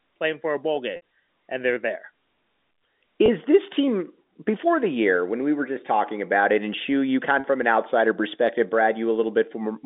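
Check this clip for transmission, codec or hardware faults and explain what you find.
One transmission fault is audible: packet loss with pitch repetition from 0.96 to 1.01 s, between "playing for a bowl" and "and they're there". About 60 ms of audio failed to arrive, which fits three 20 ms packets dropped in a row. The receiver filled the hole by repeating the last pitch period of the speech and fading it down. The result is a brief held, slightly buzzy sound in place of the missing audio, followed by a quick blend back into the live signal. The G.711 telephone coding around it carries the usual narrow 200 Hz to 3.7 kHz line band.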